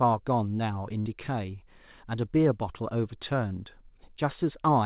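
Speech, heard band-limited with nothing above 4 kHz, as a G.711 call path at 64 kbps would give. From 1.0 to 1.08 s a short sound is smeared into a held, fading tone, then the speech jumps ahead. This is a burst of packet loss: the receiver stretched the last audio across about 57 ms and then resumed, skipping roughly 60 ms of speech.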